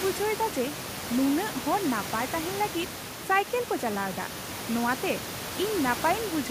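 Nothing in this speech recording points to a technical problem, and the only thing in the background is some room noise sitting about 11 dB under the talking.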